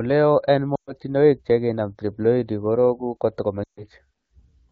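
At 0.76 s and again at 3.64 s, lost AMR speech frames cut into the speech. Corrupted frames were concealed by repeating the last good sound with falling gain. Each gap drops quickly to near silence. The gaps end at 0.93 s, before "chekinam triploidy", and at 3.83 s. Both fit roughly 120 to 140 ms of missing wideband audio.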